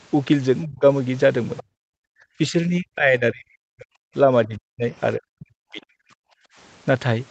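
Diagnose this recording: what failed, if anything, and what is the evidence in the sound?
The speech is suppressed in double talk at call-processing stage, most likely because the echo canceller's suppressor clamped both talkers when it could not separate near-end speech from loudspeaker echo. The speech level falls hard at 0.65 to 0.84 s, 1.61 to 1.67 s, 2.38 to 3.96 s, 4.46 to 4.95 s and 5.16 to 6.12 s. The dips reach roughly 30 to 40 dB, and the longest lasts about one and a half seconds. On a waveform the envelope collapses into near-silent troughs. On a spectrogram the speech harmonics fade out across the whole band in those spans.

The other side's voice is leaking through between 1.57 and 1.63 s, a brief scrap sitting roughly 20 dB below the talker. This likely comes from residual echo the canceller failed to subtract from the microphone signal before its suppressor engaged, which it does right after, at 1.61 s. 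It is a faint fragment rather than a clear second voice. On a spectrogram it appears as a weak, separate harmonic trace just before the gap, too small to stand out on a waveform.

Background gated by the echo canceller, again in call processing: the room tone drops out between 1.95 and 2.2 s by about 40 dB, and between 6.4 and 6.56 s by about 27 dB. In each case it returns once the canceller releases. Here the suppressor treated the microphone as carrying only echo and pulled its gain down hard for a fraction of a second. A spectrogram shows the noise floor going dark in a clean vertical band. The waveform's low-level hiss flattens to near zero and then resumes.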